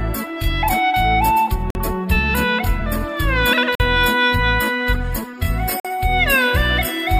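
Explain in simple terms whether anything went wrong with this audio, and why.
Brief 48 ms holes cut the sound at 1.70, 3.75 and 5.80 s. This is a gap between chunks: silence left where 2-second pieces join.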